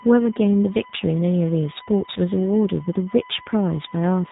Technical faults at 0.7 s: USB whine; G.729 codec

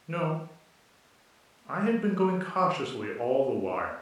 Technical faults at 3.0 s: none

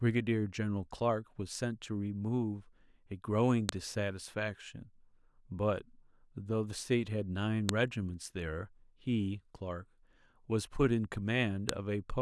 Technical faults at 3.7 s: file header played as audio

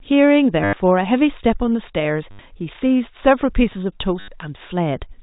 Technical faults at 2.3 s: packet loss with last packet repeated

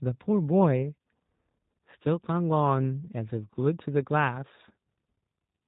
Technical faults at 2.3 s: G.729 codec

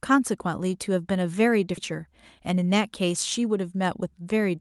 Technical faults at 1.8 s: skip ahead

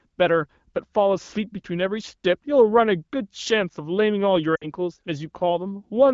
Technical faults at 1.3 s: none

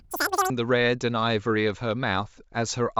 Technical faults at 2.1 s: none

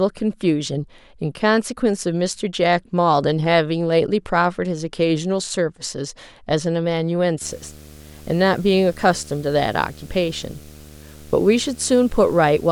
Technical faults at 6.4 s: none

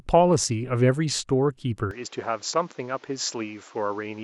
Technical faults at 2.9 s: input switched to a poorer device

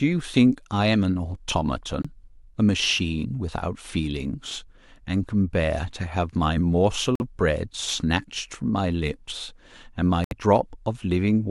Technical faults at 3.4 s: none

